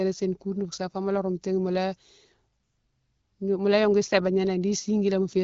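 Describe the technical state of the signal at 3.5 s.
At 3.5 s the speech is intact, with no fault present. It is carried through the AMR wideband (HD Voice) codec at 12.65 kbit/s, which leaves only light coding traces and nothing above about 6.9 kHz.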